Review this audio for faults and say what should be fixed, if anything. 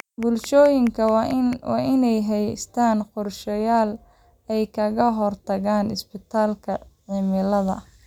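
A train of clicks runs from the very start to about 1.54 s. The clicks come at a steady 4.6 per second. There are about seven of them, each much the same sharp shape. They peak around 5 dB above the speech, so they poke out clearly as regular ticking, gaps included. The cause is likely electrical interference from nearby equipment or a faulty connection or power supply. Either could inject a repeating pulse into the signal. To prevent it, move interfering gear away, check cables and grounding, and make sure the interface runs stably before recording.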